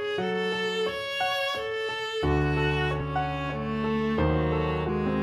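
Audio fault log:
3.00 s and 4.88 s: compressed frames skipped. The decoder never played a few whole blocks of the encoded stream, either because they were missing or because it rejected them as damaged. The sound jumps forward by roughly 100 ms at 3.00 s and roughly 150 ms at 4.88 s, each gap fitting a handful of 23.2 ms frames.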